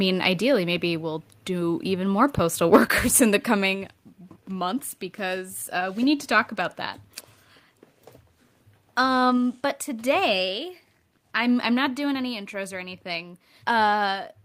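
Speech, with microphone overload from 2.37 to 2.41 s. The loudest peaks there are flattened, giving a harsh, crackling edge. Roughly 40 percent of samples are cut. The likely cause is input gain set about 5 dB too high, driving the converter past its limit.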